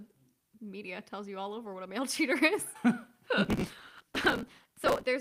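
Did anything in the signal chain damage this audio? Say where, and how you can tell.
Yes. From 3.45 s to 5.06 s the speech is overlaid with a dense, gritty crackle, a processor overload crackle at the driver or buffer stage. The processor kept missing its deadlines for buffers of roughly 3 ms, and each missed block was simply skipped, leaving a hard-edged gap. Several hundred such skips run together into a tearing texture. The waveform shows many tiny step discontinuities, and a spectrogram shows broadband vertical streaks packed across that span.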